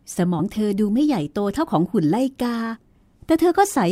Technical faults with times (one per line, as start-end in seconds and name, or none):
0.38-0.41 compressed frames skipped
2.73-2.78 compressed frames skipped